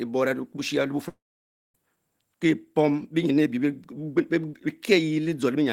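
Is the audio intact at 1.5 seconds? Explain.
No. A long network dropout runs from 1.08 to 1.75 s. The last sound carries on briefly as a fading buzz, then about 0.56 s of near silence follows. About 0.66 s of speech is missing, likely because no audio arrived during that stretch.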